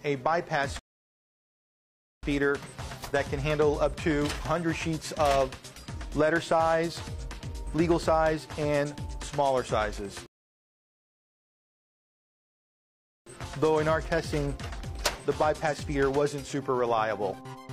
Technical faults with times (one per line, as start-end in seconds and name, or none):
0.79-2.23 rebuffering stall
10.26-13.26 rebuffering stall